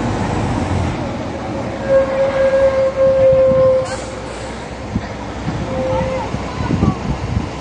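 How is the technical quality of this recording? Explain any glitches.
Quality is poor. Throughout, the sound is dull, smeared and fizzy, with nothing above 9.7 kHz: likely AAC compression at a bitrate around 32 kbps, discarding high frequencies and fine detail.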